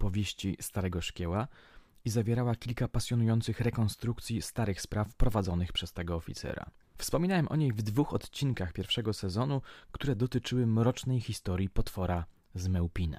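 Nothing in the recording stood out as a technical problem on listening.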